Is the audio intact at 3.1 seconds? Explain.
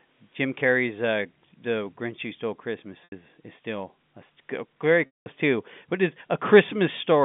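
No, packet loss with pitch repetition hits from 3.04 to 3.12 s, an 80 ms gap that fits four lost 20 ms packets. The receiver repeats the last pitch period, fading it over about 50 ms, so a brief buzzy hold dies toward silence before speech cross-fades back.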